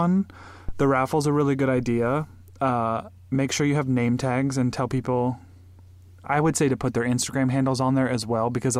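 A speech clip with a phantom power thump right near the start, from about 0.69 to 0.98 s: a deep low thud peaking around -17 dBFS and dying away in roughly 67 ms, the kind of step you get when supply voltage switches on a live input and rides through the coupling capacitors.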